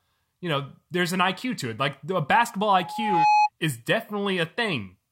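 At 2.73 s a loudspeaker feedback squeal kicks in and runs until 3.50 s. The mic is picking up the speaker it's feeding, and around 843 Hz the loop gain tips over one, so that frequency keeps reinforcing itself. You hear a single tone creep up over roughly half a second and swell into a squeal that ends up a few dB louder than the speech underneath it.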